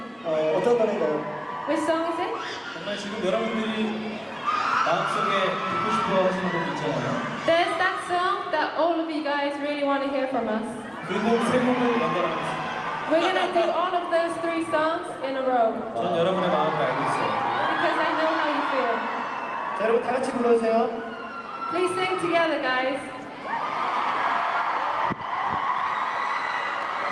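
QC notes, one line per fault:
Nothing stood out on listening.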